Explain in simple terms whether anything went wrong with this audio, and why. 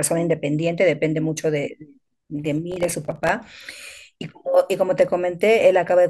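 From 2.72 to 3.29 s the speech crackles and tears: processor overload crackle, where the computer missed about twenty tiny audio deadlines and left brief silent gaps.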